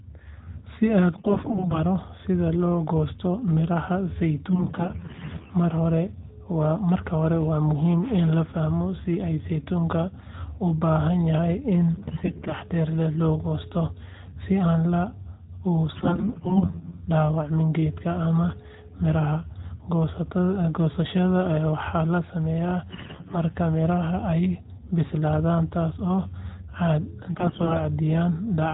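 Six bursts of AMR bit errors occur at 1.18–1.81 s (just before "sida loo goosto midhaha"), 4.50–5.51 s (right after that phrase), 11.94–12.54 s (between "u baahan yahay in" and "leh loo goosto"), 15.94–17.06 s, 22.90–23.37 s and 27.36–27.81 s. In each burst, somewhere between a tenth and a fifth of the weakly protected bits in the narrowband AMR frames arrive flipped, and the frames are still decoded. The excitation pulses land in the wrong places and the fine pitch, gain and spectral values drift, so the speech keeps roughly its pitch and level but turns hoarse, scratchy and gargly. The light, band-limited coding between bursts fits the 12.2 kbps mode.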